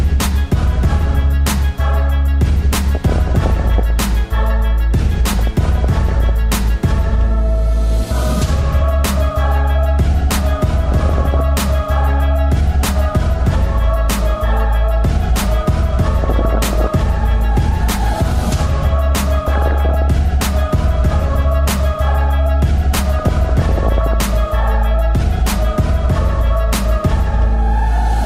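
DAB burbling breaks in six times: 2.95 to 3.90 s, 5.30 to 6.30 s, 10.92 to 11.40 s, 16.19 to 16.87 s, 19.40 to 20.08 s, and 23.19 to 24.14 s. Weak reception lets bit errors, around one percent or a little under, slip past error correction into the MP2 data. Corrupted samples put short blips of noise in single sub-bands, and corrupted scale factors make sub-bands jump in level for up to a frame. The result is a burbling disturbance in each of these spans.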